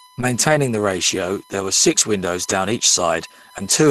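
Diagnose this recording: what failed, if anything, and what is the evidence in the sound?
A steady 1 kHz whine sits under the speech for the whole clip, about 30 dB below it. This is USB whine entering through the analogue power or ground wiring: the bus's 1 ms frame rhythm leaks in as current draw. Its fixed 1 kHz pitch, not 50 or 60 Hz, separates it from mains hum.

Two 20 ms stretches, 1.59 to 1.61 s (between "the ratio" and "were six") and 2.71 to 2.73 s, turn briefly rough and noisy with no silence. These are lost packets rebuilt from error correction: at the network stage the Opus decoder played the low-bitrate copy carried in the next packet. That lack of any gap distinguishes them from silent dropouts.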